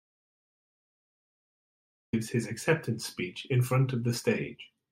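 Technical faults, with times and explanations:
0.0–2.13 s, audio dropout to silence: the speech is already missing when the clip begins. The first 2.13 s are silent, with no room tone or hiss beneath it. Speech then arrives abruptly, partway into its flow. The recorder kept writing silence while its input was gone. The likely cause is a lost input, such as a disconnected device, a failed link or a stray mute. Whatever was said during the gap is lost.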